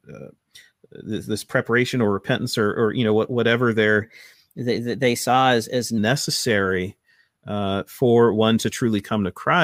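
From 4.02 s to 5.98 s, right after "you know what whatever", the speech shows a wrong sample rate fault. The samples are being clocked out faster than they were captured, with no conversion in between. Speed and pitch rise together. The passage runs about 1.09 times too fast and sits about 1.5 semitones sharp. That ratio fits 44.1 kHz material played at 48 kHz. The voice sounds slightly chipmunky and rushed, then snaps back to normal.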